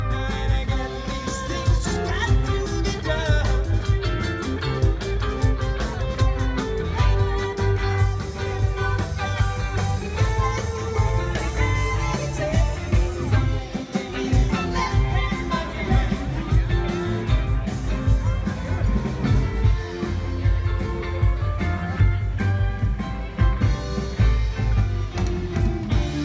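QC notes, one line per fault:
No fault found for these QC notes.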